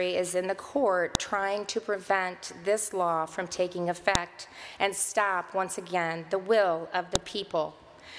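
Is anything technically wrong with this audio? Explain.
Yes. A file header is played as audio: sharp snaps at 1.15, 4.15 and 7.15 s, exactly 3 s apart, where joined pieces kept their header bytes, unlike random signal-dependent clicks.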